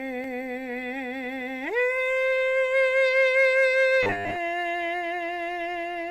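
From 4.03 to 4.37 s the music collapses into a rigid, metallic buzz pitched at 100 Hz, still loosely tracing the shape of the passage but stripped of its natural tone. This is robotic sound from repeated short buffers: fresh audio was likely arriving too seldom, so playback kept looping the last 10 ms chunk, whose repeat rate sets that 100 Hz pitch, while most of the real audio in that stretch was skipped.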